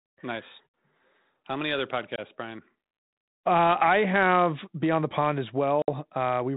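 Right after "many other", at 2.16 s, there's a hard-edged 20 ms hole, roughly one packet lost on this ADPCM call. The decoder's predictor drifts out of step, so the speech returns slightly distorted. It happens again at 5.82 s, with about three packets gone over 60 ms.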